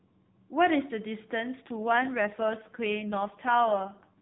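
From 1.68 s to the end of the speech, an AMR rate drop sets in. The narrowband mobile codec, which already cuts everything above 4 kHz and adds only light roughness at first, switches to a much thinner mode, which fits a step from 12.2 kbps down to 4.75 kbps. The voice turns buzzier and more synthetic. Unlike packet loss or a bandwidth switch, there is no gap and the top of the band stays where it was.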